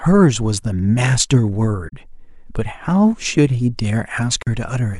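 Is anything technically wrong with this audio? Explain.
Yes. AAC frame loss with muting occurs at 1.88 to 1.94 s and again at 4.43 to 4.47 s. Missing frames were decoded as silence, and the overlapping windows fade the speech into soft-edged gaps of about 43 ms, which fits two lost frames each time.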